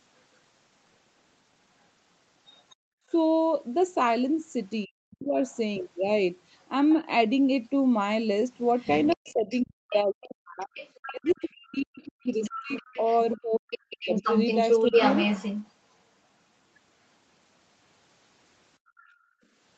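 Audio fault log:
2.56–3.11 s, 5.49–6.93 s, 8.67–15.71 s and 18.97–19.11 s: other side's voice leaking through. A second voice sits under the main talker. In the short stretches it is faint, far below the speech. From 8.67 to 15.71 s it is nearly as loud as the talker. The likely cause is the far end playing on a loudspeaker, with the echo canceller failing to strip that sound from the microphone.
2.75–3.1 s and 18.78–19.43 s: background gated by the echo canceller. The room tone suddenly sinks and then comes back. The first dip goes down about 40 dB and lasts about 0.4 s; the second goes down about 30 dB and lasts about half a second. Both overlap stretches of leaked far-end sound. The canceller heard loudspeaker output and clamped the microphone hard, taking the background with it until it released.
4.85–5.4 s and 9.14–14.31 s: speech suppressed in double talk. The talker's voice dips, dulls or breaks into pieces. 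The cuts go down by around 40 dB. The first lasts about half a second. The long stretch loses about four seconds in total, overlapping the loud leak from 8.67 s. This is likely both sides talking at once. The canceller could not separate the near voice from the echo, so it turned everything down.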